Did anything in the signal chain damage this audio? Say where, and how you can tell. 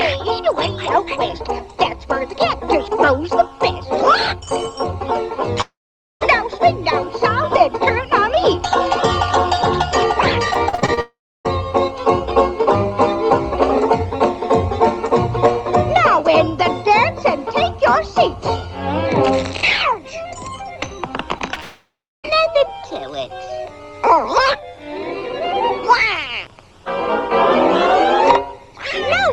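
Yes, the network stage. Long network dropout at 5.61–6.23 s, 11.01–11.47 s and 21.60–22.40 s: the last sound smears on, fades, then about 0.3 to 0.5 s of silence before the sound resumes further along. The cause is likely a sustained packet outage. Unlike a brief concealment, the fill dies out completely.

Repeated packet loss (robotic sound) runs from 10.51 to 10.99 s, just before the second dropout. Seven separate holes, the longest 40 ms, are patched one after another, covering about a third of the span. The rapid succession of patches makes it choppy rather than a single smear.

Short concealed packet loss at 21.39 s and 21.54 s, right before the third dropout. About 20 ms of audio is missing each time and filled by extending the previous sound, heard as a brief smear or wobble. These are isolated events, unlike the dense chain at 10.5 s.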